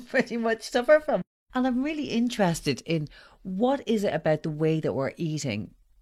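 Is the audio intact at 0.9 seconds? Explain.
Yes, the speech at 0.9 seconds is intact, with no audible fault at that moment.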